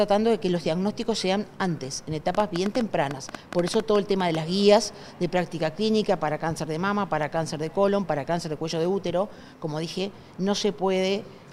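A train of clicks runs through the audio from 2.35 to 4.36 s: roughly fifteen ticks, about 8 per second at an uneven pace, poking about 10 dB above the sound, likely interference from nearby gear or a faulty connection or power supply.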